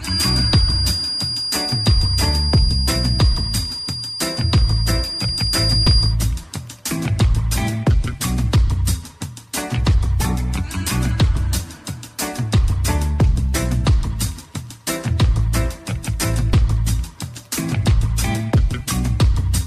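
A loudspeaker-to-microphone loop likely sat right on the edge of feedback from 0.0 to 6.2 s, producing a feedback whistle: a thin, steady tone at 4.8 kHz, only a few decibels below the sound, swelling and fading slowly in level without building up.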